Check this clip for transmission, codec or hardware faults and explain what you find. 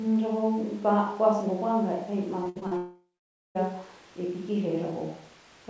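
Two network faults occur back to back, on a call path whose band stops at 8 kHz, consistent with G.722 at 64 kbps.

Repeated packet loss (robotic sound), 2.44 to 2.73 s: four gaps, the longest 61 ms, are each patched by extending prior sound. Nearly half the span is concealed, giving choppy speech with pieces missing.

Long network dropout, 2.77 to 3.57 s: about 780 ms of audio never arrives. Concealment briefly stretches the last sound, then about 510 ms of silence follows. Likely cause: a stalled network connection.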